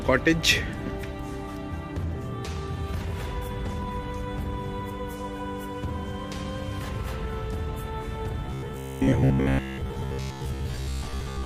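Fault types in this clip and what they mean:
Robotic sound from repeated short buffers: from 8.46 s, a rigid 66.8 Hz buzz, likely looped chunks of about 15 ms; spectrogram shows even harmonic stripes, waveform roughly repeating cycles.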